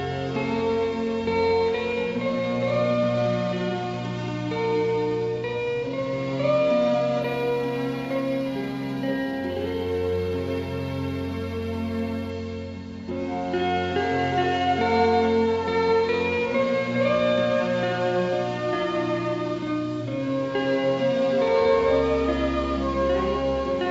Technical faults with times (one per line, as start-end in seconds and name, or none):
7.22-12.30 imaging from linear upsampling